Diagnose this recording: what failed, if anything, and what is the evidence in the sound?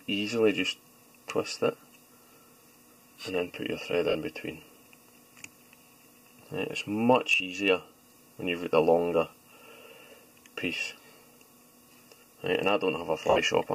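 Lost LE Audio frames at the Bluetooth codec stage: 4.09–4.15 s (60 ms), 7.35–7.40 s (50 ms), 13.30–13.38 s (roughly 70 ms). The LC3 decoder repeats the last spectrum with random signs, so tones smear into noise instead of cutting to silence like a plain dropout.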